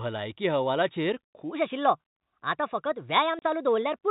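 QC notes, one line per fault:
1.51 s to the end (4.10 s): section at the wrong speed. From 1.51 s the speech runs 1.22 times faster than the opening, and its pitch rises with it by about three semitones. The sound turns hurried and thin rather than simply quicker, because speed and pitch move together. The likely cause is that this stretch was played or resampled against the wrong clock rate, so every sample arrives early and the whole waveform is compressed in time.
3.39 s to 3.42 s: packet loss filled with silence. A 30 ms hole cuts into the speech, falling inside the fast section. Audio drops abruptly to digital silence and then resumes, with hard edges at both ends. The length fits three consecutive 10 ms packets lost and replaced with silence rather than concealed. Around it, the G.711 telephone band still stops at 4 kHz.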